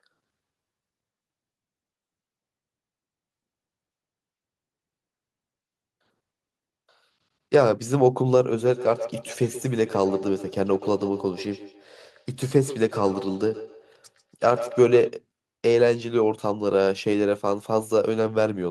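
From 8.65 to 15.14 s the speech returns at a steady interval of roughly 150 ms, peaking at about 13 dB below the voice. It is feedback echo between two devices: a second device replays this signal into the microphone, beyond its echo canceller's reach.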